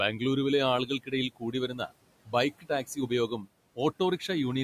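Speech is cut by the noise suppressor at 0.86 to 1.13 s, 1.3 to 1.92 s, 2.51 to 3.11 s and 3.28 to 3.48 s. It mistakes parts of the speech for noise. It turns them down by about 12 to 17 dB. Brief sounds drop out and turn faint.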